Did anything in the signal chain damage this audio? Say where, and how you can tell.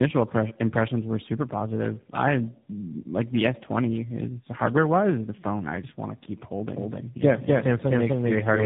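Yes. At the codec stage, the whole clip shows tandem speech coding. Nothing reaches above 3.8 kHz. The speech sounds rough, muffled and warbly. That fits three narrowband speech coders in a row, each re-coding the previous coder's already degraded output.

From 6.75 s, just after "just want to keep", a doubled audio track starts and runs to the end. A full-band copy trails by about 300 ms at roughly equal level. It starts abruptly, without decay or room colour. A second, slower capture path is the likely cause.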